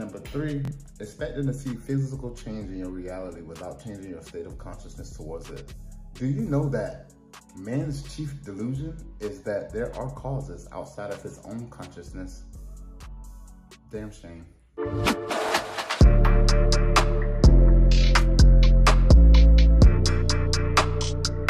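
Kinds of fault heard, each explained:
Bluetooth stutter: Wireless packets arrived late or not at all, so the receiver repeated its last buffered slice until fresh data came, then resumed further along. Here it occurs twice. At 0.65 to 0.71 s, about 46 ms is lost, heard as a brief buzzing repeat that fits two missing packets. At 15.49 to 15.53 s, a shorter catch of about 23 ms fits a single packet. Each time the audio skips slightly ahead.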